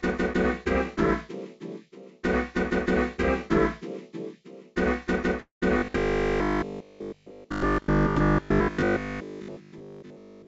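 At 5.40 s the sound stalls until 5.65 s, a call audio freeze. The last sound carries on as a fading buzz or hiss, then about 120 ms of silence. Nothing is lost; playback resumes where it stopped, about 0.22 s late. Packets were likely held up, draining the jitter buffer.

From 5.78 s to 10.46 s comes robotic sound from repeated short buffers. A rigid metallic buzz at 50 Hz sets in. It fits a 20 ms chunk being replayed while fresh audio is skipped, for most of the stretch. Through the G.722 call path, nothing reaches above 8 kHz.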